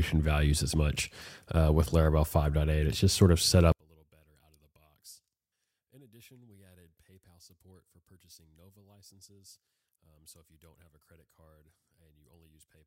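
Speech that, from 3.72 s after "just sort of set" to the end, collapses about 36 dB to a faint remnant, likely one channel inverted cancelling against the other.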